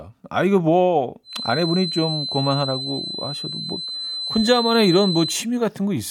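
From about 1.22 s to 5.48 s a feedback whistle sits under the speech, a thin steady tone near 4.1 kHz, roughly 10 dB down, swelling and fading slowly in level. It's likely a speaker-to-mic loop hovering just at the feedback point without tipping over.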